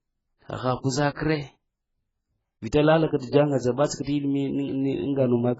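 Throughout, the speech sounds dull and smeared, with a warbling, fizzy texture and nothing above 7.6 kHz. This is heavy AAC compression, likely AAC-LC at a very low bitrate, around 12 kbps. Pre-echo puts a brief hiss of about 26 to 47 ms ahead of sharp attacks at 1.15 s, at 3.07 s just before "ka ta ŋa", at 3.18 s between "lale ka" and "ta ŋa", at 3.87 s just after "lale ka ta ŋa", and at 4.02 s. Each time, the codec spreads coding noise across the quiet stretch before the attack.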